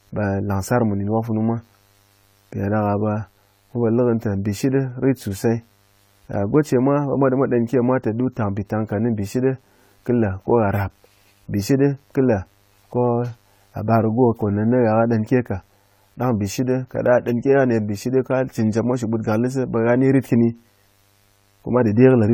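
A speech recording carries two faults from start to finish. The first is mains buzz at 50 Hz, sitting faint but constant at roughly 40 dB below the speech. Unlike a smooth hum, which stays near 50 or 100 Hz, this is raspy. Sharp switching spikes, twice per mains cycle, spread harmonics up into several kilohertz. That points to a dimmer, rectifier or unshielded run rather than a simple ground loop. The second fault is that the speech sounds swirly, smeared and hollow, with consonant attacks blurred and the top stopping at about 20 kHz. The cause is likely generation loss: repeated decoding and re-encoding, consistent with several passes through AAC-LC at around 64 kbit/s. Each pass requantises on a shifted frame grid, so noise and spectral holes pile up. A single encode at that rate would not sound this degraded.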